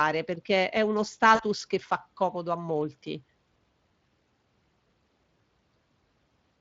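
A speech recording with a hoarse, noisy grain on every syllable, a roughness that never lets up and that marks it as Speex codec damage. Speex is a CELP codec that rebuilds the voice from a pitch predictor, a vocal-tract filter and a coded excitation. Here the excitation is coarse enough that its quantisation noise is plainly audible, which fits a Speex setting of roughly 20 kbps rather than one of its cleaner high-rate modes. Between about 1.35 and 1.43 s, right after "perché è uno" and before "che fa comodo a", the voice briefly smears into a stretched sound that sags in level before normal speech returns. That is VoIP packet loss concealed by the speech codec. About 40 ms of audio went missing, consistent with two 20 ms frames, and the decoder filled the hole by repeating its last pitch period and filter with gain lowered frame by frame. Because each decoded frame depends on the state left by the one before, the weak or distorted quality lingers for a moment after real packets arrive again.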